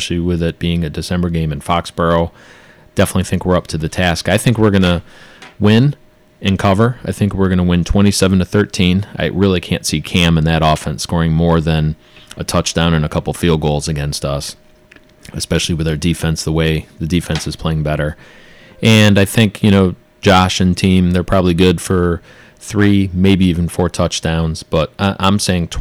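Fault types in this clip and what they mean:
Hard clipping: Some stage in the chain received speech driven about 11 dB beyond what it could pass, so every peak that crossed its ceiling was sliced flat. Only around one percent of the waveform actually hits that limit, but it does so all the way through the clip. Each flattened crest throws harmonics high into the spectrum.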